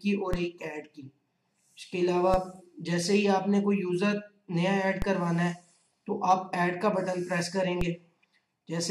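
At 0.33, 2.34, 5.02 and 7.81 s a DC step shifts the waveform's zero line by about -17 dBFS, then bleeds away through a 20 Hz high-pass. Each lands as a low thump, seen as a vertical broadband line and an offset baseline slowly settling.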